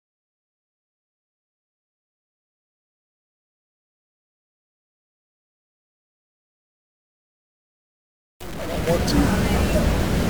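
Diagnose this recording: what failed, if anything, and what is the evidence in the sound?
A stuck bit runs through the whole recording, and the likely culprit is the converter or its data wiring. The sound carries a harsh, buzzy distortion from start to finish, and quiet gaps fill with noise instead of falling silent. Roughly half of all samples are offset by a step of around -30 dBFS. On a waveform that shows as a fixed jump clinging to the trace; a spectrogram shows broadband hash smeared across every frequency, even in pauses.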